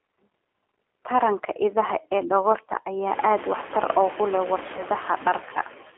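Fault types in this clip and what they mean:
Noise suppressor artifacts, throughout: the suppressor judges, frame by frame, which frequency bands hold steady noise and pulls them down by about 21 dB. The background therefore drops away in the gaps and comes back up beneath the speech, so it seems to pump in step with it. This is clearest after the room noise rises sharply at around 3 s and then sits only about 11 dB below the speech.
G.729 codec, throughout: the speech is squeezed into a narrow telephone band of about 300 Hz to 3.4 kHz. It is rebuilt from a vocal-tract filter model, a pitch predictor and a handful of pulses per short frame, which fits an 8 kbit/s G.729-type codec. The coding damage is plainly audible. The speech stays intelligible but sounds rough and synthetic, and the background noise warbles instead of hissing smoothly.
VoIP packet loss concealed by the speech codec, 4.77 to 4.83 s: about 20 ms of audio goes missing, which fits two lost 10 ms frames. 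The decoder fills the hole by carrying on from its last pitch and filter settings with falling gain, so the sound smears into a buzzy tone or a coloured noise that fades. Because each frame is built on the one before, the speech stays weak or distorted for tens of milliseconds or more after the gap ends at about 4.83 s.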